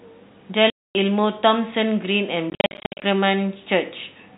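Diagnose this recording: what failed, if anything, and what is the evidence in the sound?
The network stage failed, as packet loss filled with silence. A 0.25 s hole opens at 0.70 s and ends at 0.95 s. From 2.5 to 3.02 s, gaps totalling 0.36 s are scattered, the longest 60 ms. The gap sizes fit 10 ms packets.

A single sharp click sits at 2.77 s, inside the second lossy stretch. It sounds like dropped samples, likely a buffer or driver slip removing a fraction of a millisecond. The waveform jumps abruptly, and nothing audible is missing. The G.711 telephone coding band limit is heard throughout.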